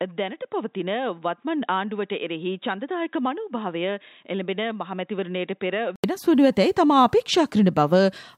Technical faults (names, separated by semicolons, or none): input switched to a poorer device